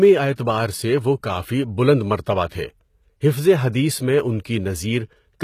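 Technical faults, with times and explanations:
Throughout, HE-AAC compression: the speech carries plainly audible codec damage, with s sounds turning gritty and lispy and the treble sounding synthetic. This is likely low-bitrate HE-AAC, around 20 kbps, rebuilding the upper band from copied lower bands, with nothing above 14.9 kHz.
2.47 to 2.51 s, pre-echo: a brief hiss of about 44 ms runs ahead of a sharp onset, leaving the attack soft and smeared. The codec spreads quantisation noise across its whole block, so noise meant for the loud attack leaks into the quiet moment before it.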